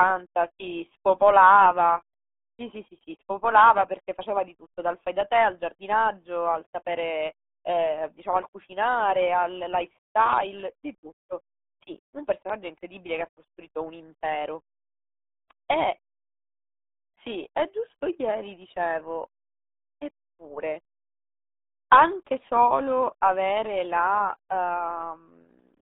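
From start to finish the speech sounds muffled, thin and gargly, with nothing audible above about 3.8 kHz and the low end cut below roughly 250 Hz, so the voice sits in a narrow telephone-like band reaching only 3.6 kHz. This is the RealAudio 14.4 codec, whose heavy damage and smeared, bubbling texture fit an 8 kbit/s dial-up speech coder that discards everything outside that band.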